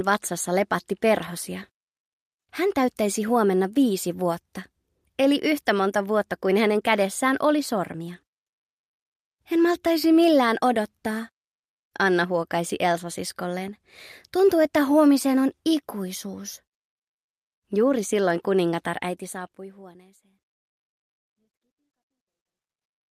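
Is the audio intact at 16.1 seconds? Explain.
Yes, the audio is intact at 16.1 seconds, with no dropout, click, distortion or other fault audible at that moment.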